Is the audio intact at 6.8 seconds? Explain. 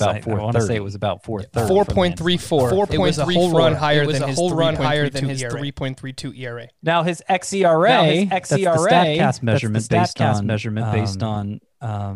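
No. At 6.8 seconds, as throughout the clip, the speech is heard twice: a full-band second copy trails about a second behind at roughly equal loudness, with no decay or room colour. This doubled audio track is likely from the same audio being captured again through a slower path.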